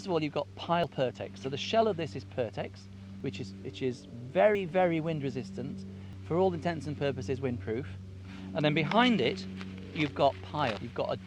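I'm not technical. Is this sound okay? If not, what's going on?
No. At 0.84, 3.20, 4.55 and 6.13 seconds the sound jumps forward as if a tiny slice were cut out, roughly a twentieth of a second each time. At 10.77 seconds the jump is bigger, about three times as long. The likely cause is a dropped buffer (overrun): the recording software fell behind, a chunk of audio was overwritten before it was saved, and the two ends were joined with nothing in between.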